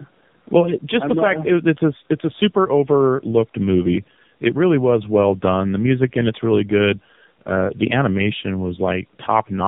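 Speech heard through tandem speech coding across the whole clip: rough, muffled and warbly, the way it sounds when a narrowband coder re-encodes another's decoded output. The sound points to two AMR-NB stages joined through G.711. On a spectrogram, nothing appears above 3.7 kHz, and the harmonics look smeared.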